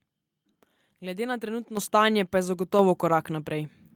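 Speech clip with a microphone volume stepped up fault, twice: at 1.77 s, right before "stanje pa je", the level jumps about 8 dB, then at 2.79 s, just after those words, another roughly 4 dB. Voice and room noise rise together, so it's the call software bumping the mic's input gain in one go.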